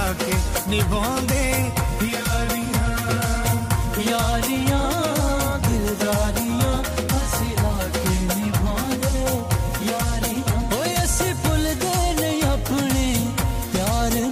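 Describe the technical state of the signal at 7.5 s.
At 7.5 s the audio is intact, with no technical fault present at that moment.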